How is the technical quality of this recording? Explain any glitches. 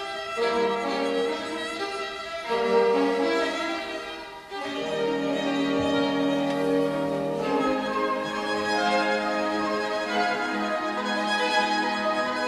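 Nothing here sounds like a glitch; the recording runs smoothly the whole way, with no dropouts, clicks or hiccups to point to.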